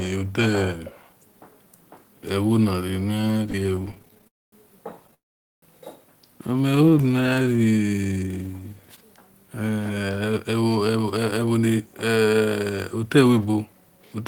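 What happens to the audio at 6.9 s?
A jitter buffer slow-down runs from 6.66 to 8.97 s. The receiver's buffer was short of reserve, so it repeated single pitch periods to rebuild it. Playback drops to about 88% speed at unchanged pitch, stretching the speech by 286 ms and drawing out its sounds.

Repeated stalls (stutter) overlap this from 6.70 to 7.59 s. Packets arrived late, so the buffer kept running dry, and each time the last sound was extended until data resumed. The result is a rapid string of very short stalls, none longer than 17 ms, filling 209 ms in all, about 23% of that span. Nothing is lost, but the speech catches and drags.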